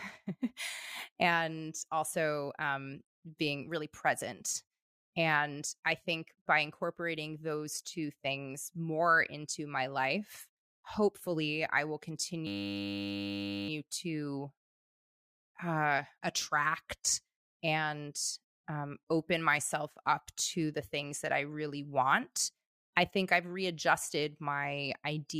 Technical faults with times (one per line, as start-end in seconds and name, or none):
12.47-13.69 system hang loop